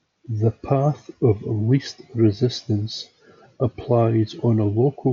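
No faults to report; the speech comes over a Bluetooth mSBC headset link working as intended, topping out around 8 kHz with only the codec's light graininess on louder passages.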